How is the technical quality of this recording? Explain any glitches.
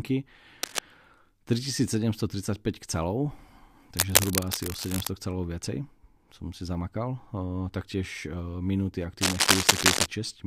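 The recording has three bursts of cable scratch noise that cut across the speech. They come at 0.63 to 0.81 s, 3.97 to 5.11 s, and 9.21 to 10.07 s, the last one right after "taktiež eh minúty". Each is a dense, ragged scratching or rustling, roughly as loud as the voice, and the final one sits a bit above it. The likely cause is a worn cable or connector being moved, so its contact resistance jumps around and sprays uneven noise into the signal.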